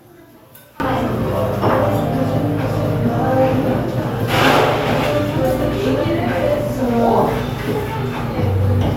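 From 0.0 to 0.8 s, one channel inverted is the likely cause: with one side's polarity reversed, whatever both channels share cancels when they are summed to mono. The sound drops by about 26 dB, leaving only a faint residue of their differences.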